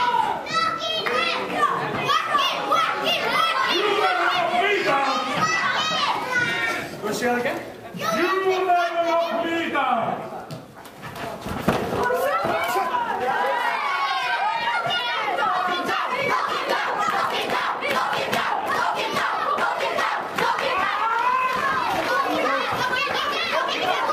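From 11.95 s to the end of the clip, the pace abruptly jumps to about 1.61 times the earlier rate while the pitch stays where it was, so the audio sounds rushed. This is a time-stretched section: the pattern likely comes from software squeezing this stretch to fit a shorter length, keeping pitch constant by dropping short pieces of the signal rather than simply playing it back faster.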